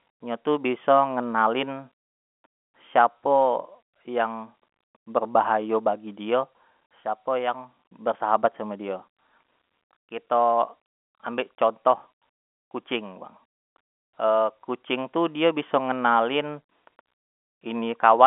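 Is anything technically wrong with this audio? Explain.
No, nothing is technically wrong.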